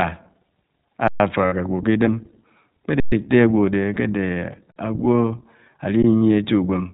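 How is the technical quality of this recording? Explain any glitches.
The recording is speech carried through a narrowband iLBC codec with audible coding damage, and it has two kinds of dropout: four playback underruns and three stretches of lost iLBC frames.

Throughout, the iLBC codec is plainly audible. Nothing above 4 kHz gets through, so the speech sounds boxed-in and telephone-like. The codec models each short frame's excitation on its own, which leaves a slightly rough, synthetic edge on the voice. The sound fits iLBC's 15.2 kbps mode with 20 ms frames. Unlike the dropouts, this colouring never comes and goes. It sits evenly on the whole clip.

Underruns with a held sample occur at 1.08–1.2 s (120 ms), 3.0–3.12 s (120 ms), 4.72–4.76 s (40 ms) and 6.02 s (about 16 ms). Each time, the output buffer ran dry and the converter froze on its last sample value, so the waveform goes flat and the sound simply stops, with no click as it enters the gap. 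Essentially no audio was lost, so playback picks up where it left off and resumes softly. This is a dead, toneless pause, with none of the buzz described below.

Lost iLBC frames occur at 1.46–1.54 s (60 ms, which fits three frames), 3.94–3.97 s (20 ms) and 6.18–6.22 s (40 ms). Here packets went missing, and the decoder filled the hole by repeating the last pitch cycle blended with noise. The result is a brief held, buzzy or breathy vowel-like tone instead of silence. Because each iLBC frame decodes independently, the voice snaps back to normal almost immediately. That filled, voiced texture is what separates these from the flat underrun pauses.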